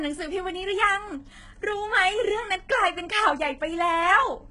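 Speech with heavy HE-AAC compression throughout. Nothing reaches above 11 kHz. The s sounds turn gritty and lispy, likely from rebuilt treble at a very low bitrate.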